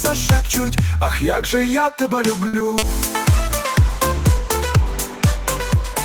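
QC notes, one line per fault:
2.47–2.55 s, short stall from a late packet: a packet arrived late and the jitter buffer ran dry, so the last sound was stretched for 60 ms and then resumed where it left off. Nothing is lost; the sound is held too long. The spectrogram shows frozen, smeared harmonics; the waveform shows a repeating, slightly decaying cycle.
2.59–2.62 s and 2.78–2.89 s, short concealed packet loss: audio never reached the decoder, about 20 ms at the first point and 40 ms at the second. The receiver extended the preceding sound across each hole and blended back into real audio, giving a brief smear or wobble. On a spectrogram these are soft, blurred patches where detail goes flat; on the waveform, short stretches of oddly regular or faded signal.
3.26 s to end, call bitrate drop: the bandwidth estimate fell and the encoder went from 32 kbps to 14 kbps, staying at the lowest rate for about 2.1 s. 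Coarser coding makes the sound watery and muffled. The spectrogram shows the upper band cut away and thinned, blotchy energy below it; the waveform envelope looks little changed.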